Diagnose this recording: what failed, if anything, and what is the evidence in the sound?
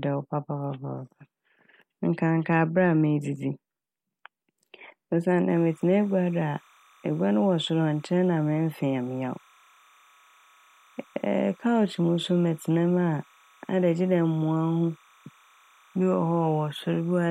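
Timecode bleed in the analogue wiring: from 5.50 s to the end, a faint chirping warble toggles between roughly 1 and 2 kHz, far below the speech. It is a two-pitch square-wave pattern, unlike a single steady whine, which fits 29.97 fps linear timecode leaking from a neighbouring line.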